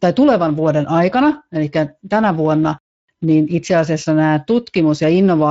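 From start to finish the speech sounds hoarse and grainy, with a rough edge on every stretch. This is Speex codec damage: the CELP coder has too few bits to model the excitation, which fits a mid-level setting around 17 kbps.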